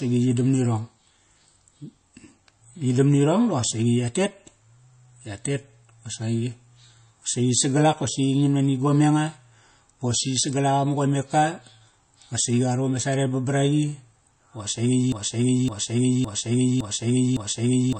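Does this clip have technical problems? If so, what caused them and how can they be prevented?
Yes. Throughout the speech, nothing is present above 8.3 kHz, and the sound is plainly watery and swirly. This is likely MP3 compression at a very low bitrate, around 32 kbps, where the encoder discards treble and weak frequency content. Prevent it by encoding at a higher bitrate or using a lossless format.

From 15.12 s to the end, a 0.56 s fragment plays five times back to back in a broken-record loop, and the audio that belonged there is lost. This likely comes from a stalled player, encoder or stream resending its last buffer. Prevent it by monitoring the stream for stalls and restarting or dropping output instead of repeating buffers.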